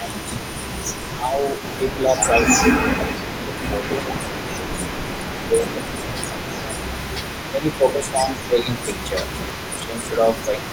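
From the start and throughout the speech, an echo leak is audible: a faint copy of the talker trails about 255 ms behind, roughly 15 dB below the direct sound. The likely cause is a far-end loudspeaker whose echo canceller left some of its microphone pickup in the return path. On a spectrogram each syllable's harmonic pattern reappears as a weaker ghost shifted a quarter-second later, and the waveform shows small secondary bursts after each word.

Speech suppressed in double talk then pulls the voice down at 0.09–0.35, 1.15–1.35, 1.96–3.86, 4.32–4.88, 5.27–6.84, 7.51–8.69 and 9.06–10.71 s, likely because the canceller, hearing both directions at once, attenuated everything. The dips are shallow, around 5 dB, in the first two and last two spans, and deeper, near 15 dB, in the middle three, where stretches of up to about a second and a half sound ducked or hollow. The waveform envelope sags in patches, and the spectrogram fades.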